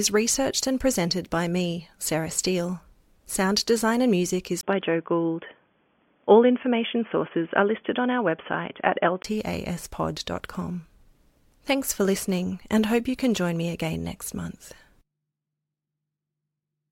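Just after "design and music is", at 4.61 s, a 20 ms gap opens and the speech turns dull and boxy, with nothing above 3.4 kHz, until 9.24 s, when full clarity returns. This is an input switched to a poorer device, likely a narrowband headset or second microphone. A simple filter would not bring the short gap at the switch or the faint new noise floor. The loudness barely changes.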